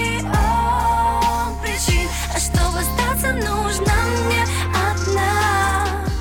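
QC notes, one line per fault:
Nothing to flag here, nothing jumps out anywhere in the clip.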